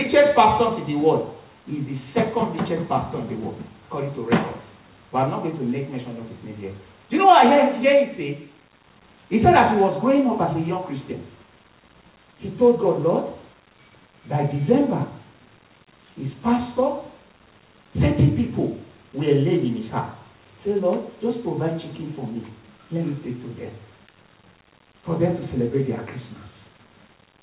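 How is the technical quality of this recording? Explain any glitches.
No glitches turn up anywhere in the recording, which carries the narrowband character of a telephone-grade call path with nothing audible above 4 kHz, consistent with G.711 mu-law coding at 64 kbps.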